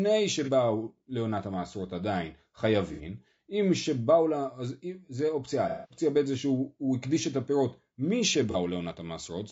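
The whole speech clip has plainly audible low-delay AAC compression, likely AAC-ELD at 32 kbps: grainy, rough voicing with noise filling between harmonics and a synthetic-sounding top band.

Then there's AAC frame loss with concealment, where the decoder patches gaps from the last good spectrum, giving a smeared, noisy or phasey stretch. The gaps are at 0.44 s (30 ms), 2.93 s (60 ms), 5.69 to 6.01 s (the longest, 210 ms) and 8.51 s (30 ms).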